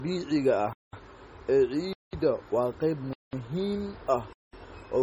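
The speech was likely first squeezed through MP3 at a very low rate, around 32 kbit/s, then re-encoded as MP3 at something like 192 kbit/s. This is a case of low-bitrate audio saved at a high bitrate. The second pass can't restore what the first discarded, so the artefacts of the cheap encode run through the whole clip, even though energy still reaches up to about 20.8 kHz.

On top of that, the audio was delivered in 1-second chunks with silence inserted between them. This gap between chunks cuts out the sound for 200 ms each time, at 0.73–0.93 s, 1.93–2.13 s, 3.13–3.33 s and 4.33–4.53 s. Nothing is lost from the material itself, but the flow stops dead every 1.2 s. The holes give a regular, stuttering rhythm of dropouts.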